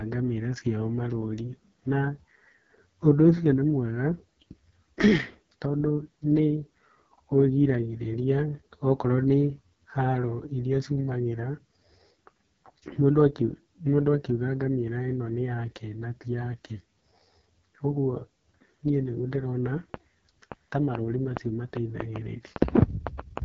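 The whole clip carries the AMR wideband (HD Voice) codec at its roughest: raspy, buzzy speech with nothing above 7.7 kHz, which fits the lowest 6.6 kbit/s mode. From 19.94 to 23.39 s, right after "niĩ nĩguo ndĩrona", a train of clicks ticks through, around fifteen pops at an uneven 3.5 per second, peaking about 15 dB above the speech, likely from nearby interference.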